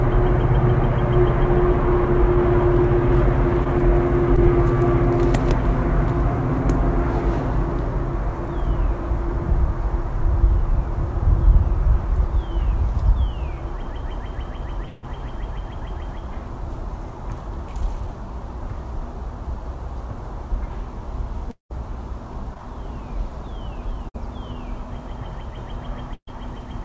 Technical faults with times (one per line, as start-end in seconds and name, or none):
3.64-4.39 scattered short gaps
14.86-15.04 long network dropout
21.50-21.72 long network dropout
22.54-22.59 short concealed packet loss
24.09-24.16 burst of packet loss
26.14-26.42 burst of packet loss